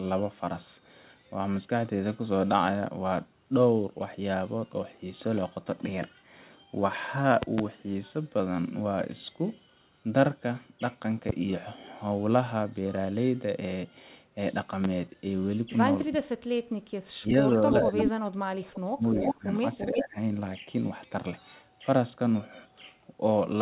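From 16.1 to 16.47 s and again from 16.87 to 19.45 s the speech dips by roughly 30 to 35 dB at its deepest. This is speech suppressed in double talk, likely an echo canceller turning the near talker down while the far side also spoke.

Inside that stretch, at 17.72–18.11 s, 18.75–18.8 s and 19.18–19.34 s, and again at 19.77–20.04 s, a copy of the voice returns 341 ms late. Most of it is about as loud as the speech, and the 18.75 s scrap sits about 25 dB lower. This echo leak is likely loudspeaker pickup that the far end's canceller did not fully remove.

A shallower suppression of about 15 dB follows at 19.91–20.18 s. Throughout, the narrowband call path cuts off everything above 4 kHz.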